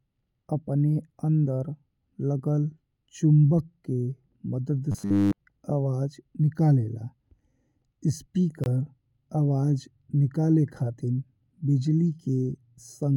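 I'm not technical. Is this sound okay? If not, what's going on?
No. From 4.92 to 5.40 s the voice turns into a rigid, metallic buzz at 100 Hz. This is robotic sound from repeated short buffers. The likely cause is audio arriving too late, so the player repeats a tiny 10 ms slice instead, skipping most of the real sound in that stretch.

At 8.64 s there is a brief hole, about 22 ms long, with softened edges. This is a gap at a join of encoded pieces. The recording was saved in 10-second chunks, and silent padding at a chunk boundary was left in. The sound then carries on.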